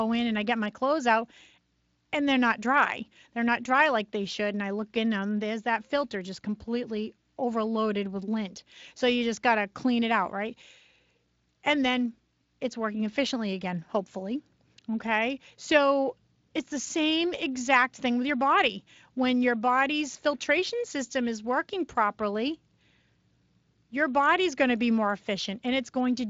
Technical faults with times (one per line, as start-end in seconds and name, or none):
none